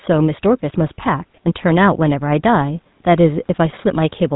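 GSM full-rate codec damage runs through the whole speech clip. The codec rebuilds the voice from a vocal-tract model driven by sparse, regularly spaced pulses, which fits a 13 kbps full-rate stream. Nothing survives above 3.9 kHz, leaving a plainly audible buzzy, gravelly roughness.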